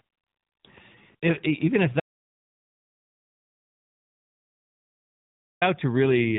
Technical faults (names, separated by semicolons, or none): audio dropout to silence; AMR rate drop